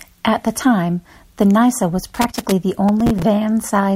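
Loose connector crackle runs from 2.14 to 2.52 s in this speech recording: a worn or dirty contact keeps making and breaking as it shifts, chopping the signal and adding pops from any DC on the line, so an irregular scratchy burst cuts across the sound. Processor overload crackle follows from 2.89 to 3.23 s, a gritty tearing where the processor missed about ten deadlines over a short stretch on buffers that sound to be around 5 ms long, each miss replaying a hard-edged fragment of old audio until the load eased.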